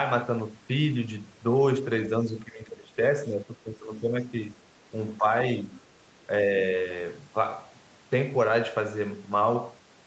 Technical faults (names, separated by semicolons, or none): speech suppressed in double talk; other side's voice leaking through